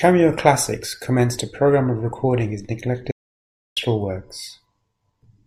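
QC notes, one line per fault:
3.11–3.76 s, audio dropout to silence: right after "programme of recording his" the speech cuts off abruptly for about 650 ms, most likely from a lost input link or stray mute. The waveform flatlines to silence and the spectrogram goes fully black, with no room tone.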